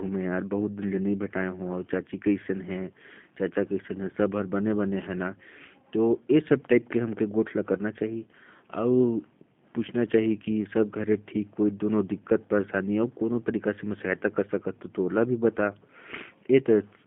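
Throughout, G.729 codec coding rebuilds the speech from sparse pulses, so it sounds plainly rough and synthetic. The spectrogram is empty outside 150 Hz to 3.5 kHz.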